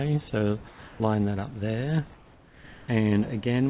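From 0.68 to 1.0 s, the background changes. It becomes smoother and about 3 dB quieter for 320 ms. This is comfort noise in place of the background. The sender likely stopped transmitting during a pause, and the receiver filled the gap with synthetic noise. From 2.14 to 2.88 s, the same swap lasts 740 ms, about 2 dB quieter. Throughout, the call path passes nothing above 4 kHz.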